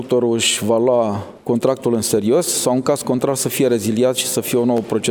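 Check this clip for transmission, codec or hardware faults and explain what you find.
One fault is present: a regular ticking. From 0.43 s to 4.78 s a click or pop recurs every 0.87 s, about seven times, wherever there is signal. These are most likely clock drift buffer slips. The sending and receiving devices seem to run on separate clocks that disagree by a few hundred parts per million. The buffer between them gradually overfills or drains until it drops or repeats a block of roughly fifteen samples, and each such jump in the waveform produces a click.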